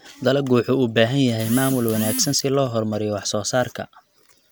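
Nothing stood out on listening to the speech in this recording.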